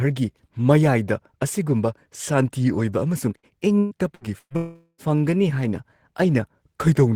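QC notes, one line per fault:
3.37–4.53 s, repeated packet loss (robotic sound): the speech turns choppy across four short holes, the longest about 118 ms. Each hole is patched by stretching the preceding sound, so roughly 30% of this stretch is filler rather than real audio.
4.56–5.01 s, long network dropout: the sound smears into a fading continuation of the last sound for about 0.42 s, then falls silent for about 30 ms before speech resumes with that portion missing. The likely cause is a lengthy interruption in arriving audio, concealed by extrapolating the last sound.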